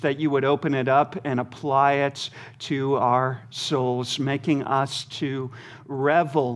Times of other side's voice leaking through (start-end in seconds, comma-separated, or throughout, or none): none